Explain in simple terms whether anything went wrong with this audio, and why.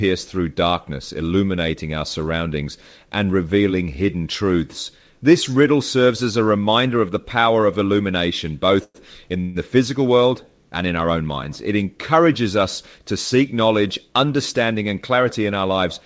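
Two short call audio freezes interrupt this speech. The first comes at 8.84 s, right after "the power of illumination". The last sound stretches into a fading buzz for about a tenth of a second, then drops to 40 ms of silence before "in the physical world" resumes. The second, at 9.40 s just before "the physical world and", is a 145 ms buzz with no silence. The likely cause is delayed network packets leaving the call's buffer empty. Nothing is lost. Each pause simply pushes the rest later.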